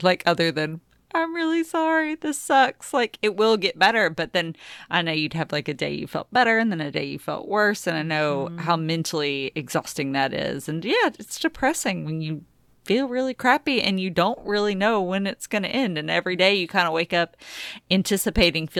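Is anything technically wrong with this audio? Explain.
Yes. From 7.34 to 10.80 s, after "then a day you" and before "yeah it's depressing when", a faint hiss and roughness rides on the speech, loudest on loud and bright sounds. This is sample clock jitter: timing wobble of under a microsecond mis-times samples, leaving error around 45 dB below the signal.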